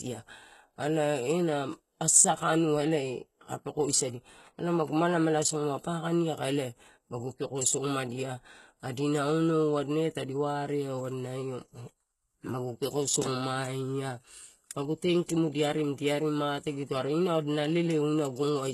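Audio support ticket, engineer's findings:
HE-AAC compression, throughout the speech. Plainly audible codec damage: gritty, metallic sibilants, treble rebuilt rather than carried, nothing above 12.3 kHz. Likely low-bitrate HE-AAC, consistent with about 16 kbps, copying lower bands upward so harmonics misalign above the crossover.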